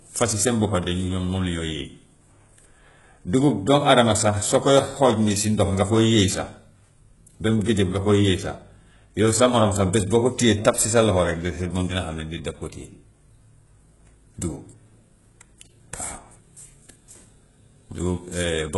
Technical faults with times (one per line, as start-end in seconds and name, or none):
0.00-18.77 HE-AAC compression
7.70-9.97 channel delay (comb filtering)